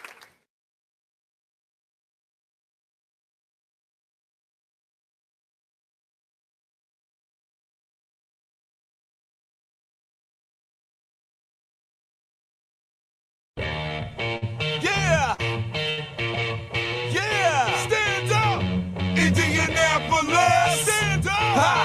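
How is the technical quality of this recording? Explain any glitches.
The recording has three short stalls from a late packet, at 14.37, 15.34 and 15.90 s. In each case a packet arrived late, the jitter buffer ran dry, and the receiver stretched the last sound for 43, 39 and 72 ms before resuming where it left off, with nothing lost. Each stall adds the same amount of delay to everything after it. You hear a sound held unnaturally long, possibly with a buzz or dip. On a spectrogram, each stall looks like a short, smeared horizontal stretch of frozen spectral content. On a waveform, it shows as a brief repeated cycle pattern.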